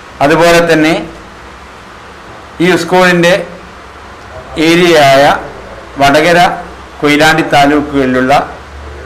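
No technical faults are audible.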